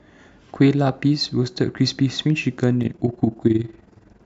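From 2.83 s to the end at 4.26 s, the speech takes on overlap-add ripple. The signal was split into windowed frames and rejoined with an overlap whose windows don't add up to a steady gain, so the level swells and dips once per frame, about 11 dB deep, at around 20 times a second. It sounds like a rough tremolo. The waveform envelope shows regular scalloping, and a spectrogram shows evenly spaced vertical banding across all frequencies.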